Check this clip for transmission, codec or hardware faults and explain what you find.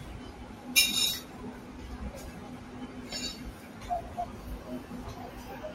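One fault runs through the whole clip. A noise suppressor applied to music or sounds mistakes sustained tones and decaying tails for noise and pulls them down by around 10 dB, so the sound pumps and thins between attacks.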